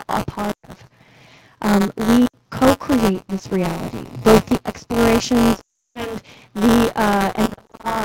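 Right from the start there's buffer tearing: a steady robotic buzz at 188 Hz riding on the speech, which fits a 256-sample buffer. The writer and reader have slipped, so a small slice of each buffer still holds audio from a lap earlier, with hard joins either side.

Lost AMR speech frames punch holes at several points. The decoder stretches the last good sound and fades it out, then the voice recovers roughly. Between 0.51 and 0.73 s, about 140 ms is lost, with the longest run at 120 ms. At 2.26 to 2.34 s there's a shorter 80 ms gap. Right after "both the explorations", from 5.59 to 6.16 s, 360 ms goes missing, long enough to fade to silence. From 7.45 s to the end, short scattered drops add up to 200 ms and give a warbly stutter.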